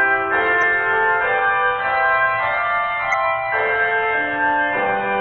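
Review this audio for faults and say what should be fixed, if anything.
Damaged data in the compressed stream at 0.59–0.63 s and 3.10–3.14 s makes the decoder lose frame sync and hunt for the next header, leaving two brief disruptions. Protect the transfer with checksums and re-fetch corrupted frames.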